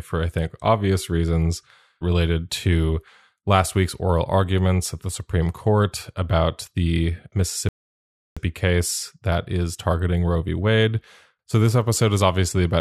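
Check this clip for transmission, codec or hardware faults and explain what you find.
One transmission fault is present: a rebuffering stall. At 7.69 s, after "about the", the speech drops to silence until 8.37 s. The player ran out of downloaded audio and waited for more. Playback then resumes at "case that is targeting" with nothing lost, adding 0.68 s.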